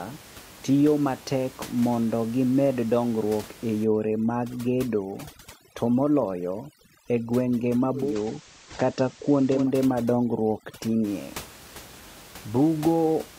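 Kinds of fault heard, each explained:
overdone noise removal: from 3.84 to 11.04 s, after "matek mondo gimed dongruok", the background drops and breaks up into warbling specks; spectrogram shows holes and isolated twinkling specks.
digital radio blending to analogue: from 7.93 to 9.72 s the signal cross-fades over about 234 ms to FM, with hiss roughly 30 dB down and about 2 dB level shift.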